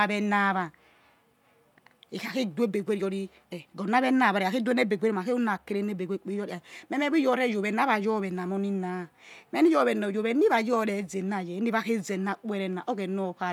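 No faults detected anywhere in the speech recording.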